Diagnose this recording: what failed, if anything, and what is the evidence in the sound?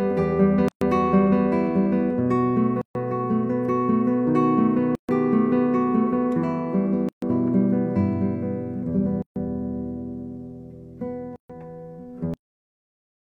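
Gaps at a join of encoded pieces, at the codec stage. The sound drops out abruptly at 0.68, 2.82, 4.95, 7.09, 9.22 and 11.36 s, each silence about 130 to 136 ms long, and then resumes where it left off. The regular spacing points to material encoded in roughly 2 s pieces and concatenated untrimmed. Each join keeps the encoder's start-up delay and last-frame padding as silence, and its edges are smeared.

The end is cut off, a failure at the driver, buffer or storage stage. At 12.34 s the audio stops mid-sound and falls straight to digital silence with no decay, and that silence holds for the remaining 0.9 s. The final buffers never reached the file or the output, so the sound was truncated rather than ending naturally.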